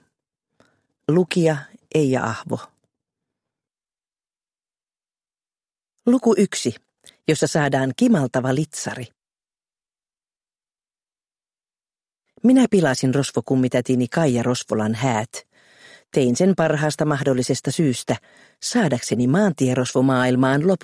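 Nothing stood out on listening to this recording.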